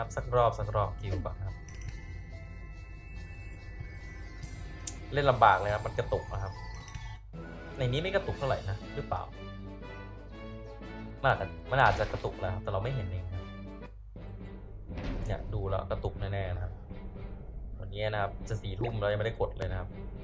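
From 10.9 to 12.5 s, a resampler restarted on every block: each 100 ms chunk is converted alone, leaving edge errors heard as steady 10 Hz ticks.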